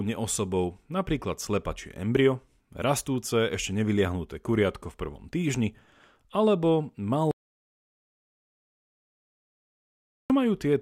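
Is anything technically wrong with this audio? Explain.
Yes. From 7.31 s to 10.30 s there is an audio dropout to silence. The speech cuts off abruptly right after "v prvom týždni alebo" and about 3.0 s of silence follows, with no room tone or background noise, before sound returns. The likely cause is a loss of input, such as a disconnected device, a broken link or an unintended mute, while the recorder continued writing silence. Whatever was spoken during that gap is unrecoverable.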